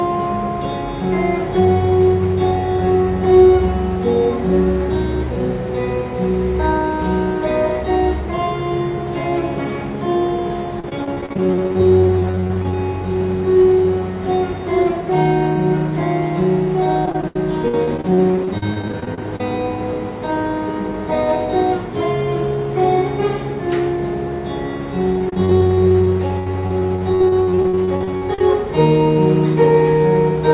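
From 10.8 to 12.73 s, 17.05 to 19.4 s and 25.18 to 28.41 s there's repeated packet loss (robotic sound). Dozens of dropouts, the longest about 70 ms, get patched by stretching the last bit of audio, so it turns choppy, with pieces missing, over the narrowband call-path sound, which stops at 4 kHz and fits a likely G.711 link.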